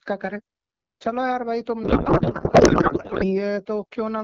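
Speech over AMR wideband that turns to garbled noise and warble from 1.83 to 3.42 s, barely tracking the talker. This is a codec payload misread: octet-aligned AMR frames are being unpacked as bandwidth-efficient, so the fields land in the wrong places.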